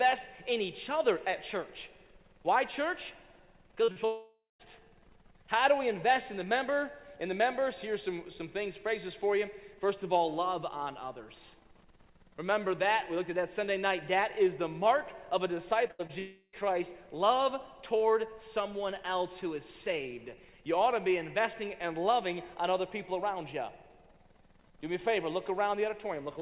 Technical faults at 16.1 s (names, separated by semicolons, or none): burst of packet loss; short concealed packet loss; long network dropout